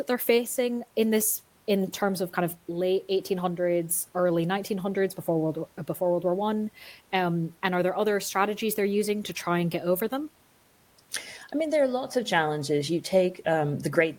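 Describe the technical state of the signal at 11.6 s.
At 11.6 s the speech signal is intact, with only the faint room noise of the recording space sitting about 37 dB below the voice.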